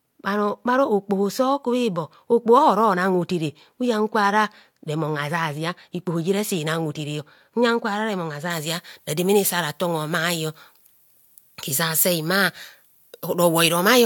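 From 8.50 s to the end of the speech at 14.06 s, pre-emphasis is left on. The treble lift applied for transmission, matching the 75 µs FM curve, never receives its complementary de-emphasis, so the top end sits about 13 dB hot at 10 kHz relative to 1 kHz. The voice turns thin, glassy and hissy, with sibilants that sting. On a spectrogram the upper bands brighten sharply from that point onward, and the waveform shows spikier, more jagged peaks.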